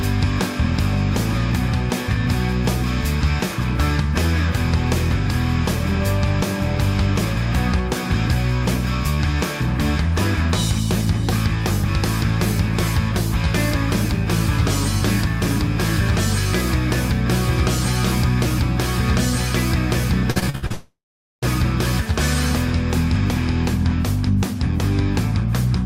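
From 20.31 to 20.72 s there is repeated packet loss (robotic sound): five short holes, the longest 69 ms, each patched by stretching the preceding sound, so about half of this span is concealment. Unlike a single dropout, the gaps keep recurring, giving a choppy stutter.

At 20.72 s the audio stops for about 0.7 s until 21.44 s, likely a long network dropout. The last sound is carried on as a fading buzz or hiss, then roughly 0.44 s of silence follows before the sound returns with that stretch missing, one sustained gap rather than rapid stutters.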